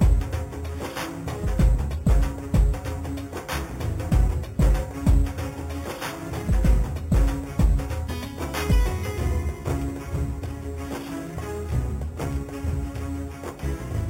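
A bright metallic fizz runs through the whole clip, rising and falling with the sound at about 24 dB below it, while its lowest band, 4 kHz to 8 kHz, moves against the pitch. This is imaging from sample-and-hold upsampling: audio apparently first sampled at 8 kHz was raised to 44.1 kHz by repeating samples without smoothing, leaving mirrored spectral copies.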